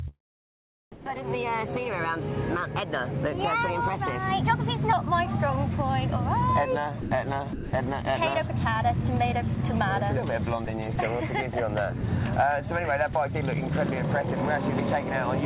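For the first 4.93 seconds the sound is high and hurried, running about 15 percent fast with its pitch raised by roughly two semitones, so tempo and pitch shift together before settling to their natural rate. This points to a section at the wrong speed, most likely a stretch played or edited against the wrong clock, which speeds the sound and raises its pitch by the same ratio. Three times the sound briefly gives way to flat, steady noise before it returns: at 0.92 s for 140 ms, at 7.01 s for 100 ms, and at 7.53 s for 200 ms. That is likely sound dropped by the voice detector. The sender probably judged these moments to be background and stopped transmitting, and the receiver filled the gaps with comfort noise. About 80 ms of real sound is lost in the first gap, and the full length of each of the other two. Throughout, nothing is heard above 4 kHz, which fits the G.711 mu-law telephone coding of the call path.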